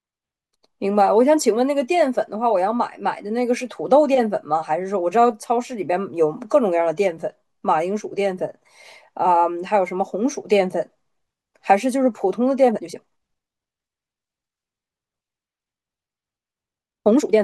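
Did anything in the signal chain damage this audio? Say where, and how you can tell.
Yes. From 12.66 s to the end at 17.44 s the speech abruptly runs about 1.55 times faster while its pitch stays put, sounding rushed. That is a time-stretched section, likely from software squeezing the passage by dropping short segments.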